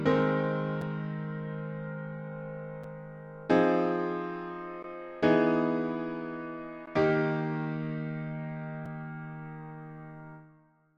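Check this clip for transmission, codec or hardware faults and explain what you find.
Brief silent holes recur through the clip. Gaps between stream segments at 0.82, 2.84, 4.83, 6.86 and 8.86 s: mismatched segment timestamps every two seconds leave 4 to 16 ms of inserted silence, heard as hard-edged dropouts.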